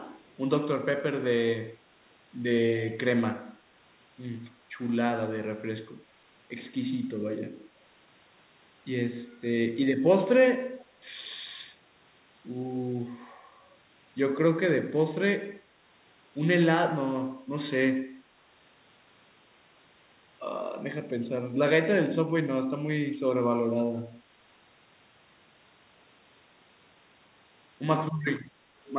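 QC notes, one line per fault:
0.22–0.35 s and 10.80–10.86 s, echo leak: brief faint scraps of the speech repeat 255 ms late, about 40 dB below it first, then about 30 dB below. Likely a loudspeaker's sound that an echo canceller failed to fully remove and sent back.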